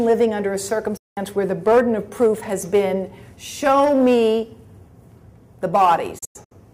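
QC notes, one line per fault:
0.97–1.18 s, digital broadcast dropout: the receiver stopped getting usable frames and muted, with an 8 ms fade into a solid silent hole of about 190 ms, consistent with six lost frames. The waveform drops flat and the spectrogram shows a clean vertical blank band across all frequencies.
6.18–6.52 s, digital broadcast dropout: the same muting, this time in several short holes scattered over 320 ms, the longest 96 ms, each edged by an 8 ms fade. The waveform and spectrogram show a comb of narrow blank columns rather than one gap.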